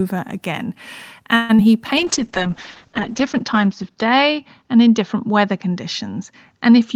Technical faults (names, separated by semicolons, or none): call audio freeze; short concealed packet loss; call bitrate drop